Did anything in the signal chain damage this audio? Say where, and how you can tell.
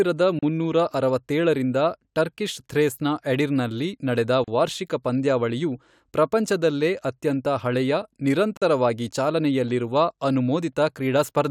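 Yes, at the codec stage: a gap at a join of encoded pieces, three times. Silences of 36 ms at 0.39 s, before "ಮುನ್ನೂರ ಅರವತ್ತೇಳರಿಂದ ಟರ್ಕಿಶ್ ಥ್ರೇಸ್ನ", 37 ms at 4.44 s, after "ಟರ್ಕಿಶ್ ಥ್ರೇಸ್ನ ಎಡಿರ್ನ್ನಲ್ಲಿ ನಡೆದ", and 46 ms at 8.57 s cut the speech, which then resumes unchanged. Untrimmed encoder start delay and last-frame padding remain at each joint.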